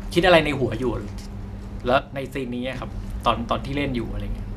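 From 1.99 s to 2.75 s, one channel likely drops out of the stereo signal, so the mono mix receives only half its usual contribution. The speech level falls abruptly by about 6 dB for those 0.76 s, then jumps back up.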